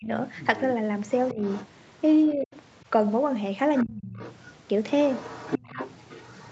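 Speech suppressed in double talk hits first, from 0.00 to 0.09 s: the speech drops by about 25 dB. The likely cause is an echo canceller that could not tell the talker from loudspeaker echo while both sides spoke, so it turned everything down.

The other side's voice leaking through follows from 0.34 to 2.32 s, a second voice about 20 dB below the speech. Inside it, the speech dips briefly by about 15 dB at 1.32 to 1.39 s. Just after it ends, the speech falls away by about 40 dB from 2.34 to 2.51 s. The leak is likely far-end sound from the loudspeaker that the canceller failed to fully remove from the microphone.

The leak returns at 3.75 s and runs to the end, again about 20 dB down. Within it, from 3.84 to 4.19 s, the speech is suppressed again, sinking by about 30 dB for about 400 ms.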